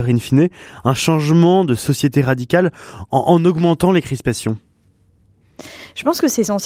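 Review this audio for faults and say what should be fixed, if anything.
I can't hear any technical fault anywhere in this speech recording. Nothing needs to be fixed.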